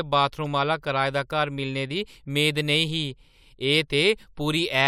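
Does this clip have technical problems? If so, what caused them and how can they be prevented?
Yes. Corrupt frame decoded at 0.45 s: flipped bits in what sounds like a couple of damaged frames were played anyway, leaving a quiet glitch. Error-checked transport with concealment of bad frames would prevent it.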